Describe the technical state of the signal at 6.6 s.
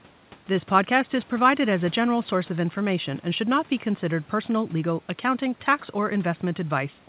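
At 6.6 s the signal is intact, with the speech carried cleanly through the call path's narrowband coding, which leaves nothing above 4 kHz, and the room's background noise sitting about 30 dB below it.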